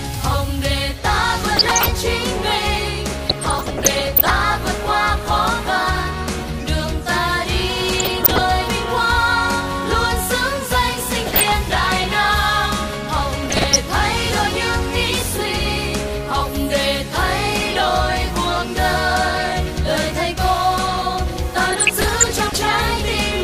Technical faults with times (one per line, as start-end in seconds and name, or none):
1.56-1.91 DAB burbling
3.29-4.30 DAB burbling
7.89-8.38 DAB burbling
11.26-11.53 DAB burbling
13.36-13.76 DAB burbling
21.71-22.71 DAB burbling